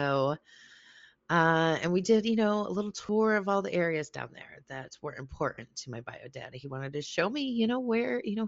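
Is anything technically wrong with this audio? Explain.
Yes. Throughout the speech there is a breathy, grainy edge, with the upper band thinned and partly replaced by hiss. This is likely Bluetooth LC3 compression: the LE Audio codec discards much of the high spectrum and fills it with noise, consistent with roughly 32 kbps in 10 ms frames.

Two brief smears interrupt the audio. The first runs from 3.07 to 3.09 s, between "you know a little" and "of all the areas". The second runs from 5.54 to 5.58 s, between "there that were" and "to my bio dad". In both, the sound turns to noisy mush for an instant. These are lost LE Audio frames: the decoder repeats the last spectrum with random signs. The gaps last about 20 ms and 40 ms, which fits two and four 10 ms frames.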